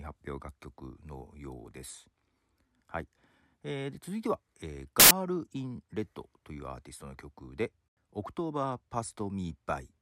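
At 5.00 s the speech breaks into a burst of loud, harsh broadband noise lasting about 110 ms, to 5.11 s: samples built from the wrong bytes. The reader has assembled each sample from misaligned or swapped bytes, so the rapidly changing low bits land in the high positions. On a waveform the segment becomes a dense, high-level block; a spectrogram shows a bright band spread across the frequencies, with the speech structure gone.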